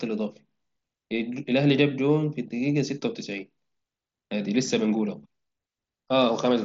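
Nothing stood out on listening to this speech recording, which comes through a Bluetooth mSBC headset link with its band ending at about 7.7 kHz.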